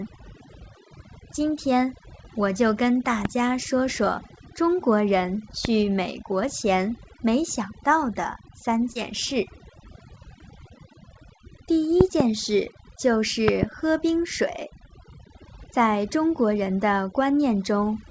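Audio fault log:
Throughout: overdone noise removal. The background drops and breaks up into twinkling specks. A noise reducer set too hard is switching individual frequency bands down or off whenever they approach its noise estimate, taking quiet detail with them.
3.25–3.27 s, 5.65–5.67 s, 12.01–12.22 s (two pops), 13.48–13.65 s (two pops): loud pop. Sharp clicks stand about 15 to 20 dB above the sound, which carries on beneath them. The likely cause is sudden voltage steps, from a plug, switch, static or driver glitch, entering the signal chain.
8.92–8.96 s: short concealed packet loss. About 40 ms of audio never arrived, and roughly 33 ms was filled by extending the preceding sound before blending back into real audio. It is heard as a brief smear or wobble within the band-limited call audio, which stops at 8 kHz.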